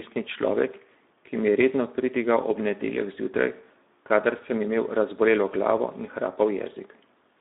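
From start to finish the speech sounds hoarse and grainy, confined to a narrow band of about 200 Hz to 3.7 kHz. This is Speex codec damage: a low-bitrate CELP setting, consistent with around 11 kbps, leaves too few bits to model the excitation accurately.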